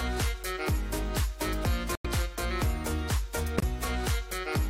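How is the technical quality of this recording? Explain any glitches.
The recording has two short gaps. At 1.95 s and 3.58 s the sound cuts to silence for about 0.11 s and 0.06 s. This is corrupt frame muted: damaged compressed frames were rejected and replaced with silence. The abrupt, unsmoothed hole with the timing intact sets it apart from concealment or a dropout that shifts the timing.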